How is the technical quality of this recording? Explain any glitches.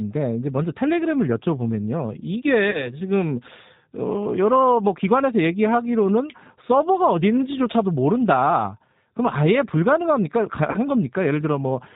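The recording has plainly audible codec damage throughout and two brief dropouts that the decoder papered over.

For the whole clip the speech sounds slightly rough, thin and synthetic, with nothing above 4 kHz. That is the G.729 codec, which fits its 8 kbit/s mode. It doesn't send the waveform. It sends a vocal tract filter, a pitch predictor and a handful of pulses per frame, and the decoder rebuilds an approximation from those. Detail and high frequencies are lost.

At 2.71 s and again at 10.71 s the voice is briefly stretched into a buzzy tone or coloured noise that fades. This is VoIP packet loss concealed by the speech codec. About 30 ms of audio went missing each time, which fits a single lost packet. The decoder filled the gap by repeating its last pitch and filter at falling gain. Because each frame builds on the one before, the voice stays weak or distorted until 2.93 s in the first case and 10.78 s in the second.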